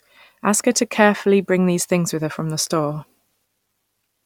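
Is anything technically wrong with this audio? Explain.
No, there is nothing technically wrong with this speech recording that can be heard.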